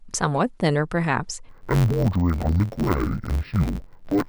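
From 1.49 s to the end, the speech turns dull and robotic with a steady buzz around 92 Hz: interleaved audio read as planar. Each 10.9 ms block got split into halves treated as left and right, so the samples are scrambled into slow-played chunks.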